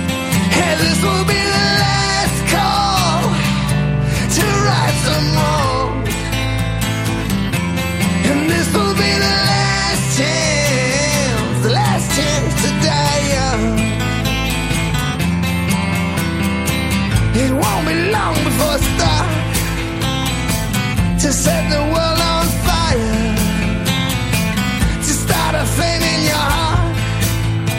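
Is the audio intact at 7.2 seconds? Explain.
Yes, the audio is intact at 7.2 seconds, with no dropout, glitch or other fault audible at that moment.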